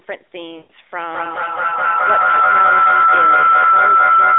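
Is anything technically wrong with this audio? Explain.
Yes, there are two faults in this speech.

Lost AMR speech frames, from 0.58 to 0.71 s: radio errors corrupted a run of frames, so the decoder kept rebuilding sound from the last good pitch and vocal tract settings while lowering the gain. The 120 ms gap fits about six lost 20 ms frames. The speech smears into a drawn-out, fading tone, then returns weak and rough. Like the rest of the narrowband call, it carries nothing above about 3.6 kHz.

Feedback howl, from 0.94 s to the end: two devices in the same room joined the call, so sound travelled from loudspeaker to microphone and back, getting louder on every round trip. The repeats grow instead of dying away, narrowing to a howl around 1.5 kHz, with the loop repeating roughly every fifth of a second. At its peak it reaches about 12 dB above the speech level. It never stops, because nothing breaks the loop.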